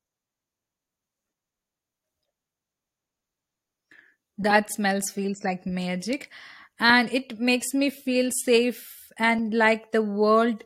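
At 4.5 s, 6.89 s and 9.39 s the speech is broken by brief blips from damaged data in a compressed stream. The decoder misreads corrupted frames and loses sync until the next header, so a short glitch appears before "smells feels like magic", before "it makes me feel", and after "makes me feel safe".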